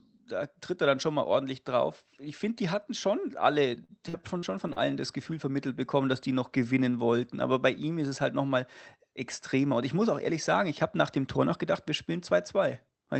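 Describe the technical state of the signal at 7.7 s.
At 7.7 s the signal is intact, with no dropout, glitch or distortion, only the ordinary character of the Opus call path it travels through.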